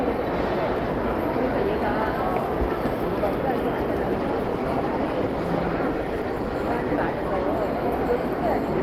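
From about 4.17 s to 7.54 s there's a call bitrate drop. The connection's bandwidth estimate seems to have sagged, so the encoder got squeezed onto a much smaller bit budget, with the quality fitting a fall from somewhere near 48 kbps to around 17 kbps. The coarser coding turns the sound rough and watery, and the top end gets shaved off so it goes muffled. It stays at its worst for about 3.3 s before the detail returns.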